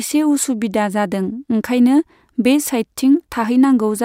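No technical faults are audible anywhere in this speech.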